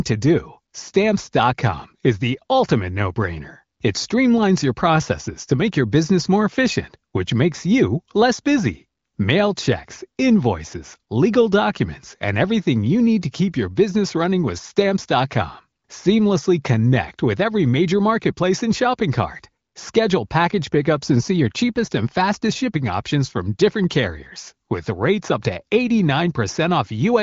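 Speech carried over the AMR wideband (HD Voice) codec, at a quality consistent with its 18.25 kbit/s mode and with nothing above 7.5 kHz, shows no technical fault.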